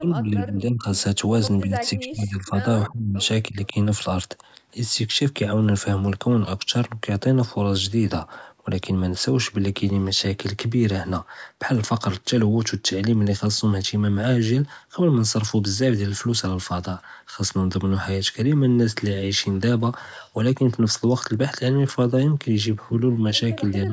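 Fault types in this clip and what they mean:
Speech suppressed in double talk: the voice dips by up to about 30 dB in the first few seconds and again right at the end, likely the echo canceller ducking both sides.
Echo leak: brief, faint scraps of a copy about 327 ms late and about 25 dB down, likely loudspeaker pickup the canceller didn't fully remove.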